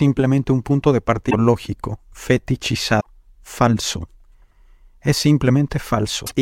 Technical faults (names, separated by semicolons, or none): damaged data in a compressed stream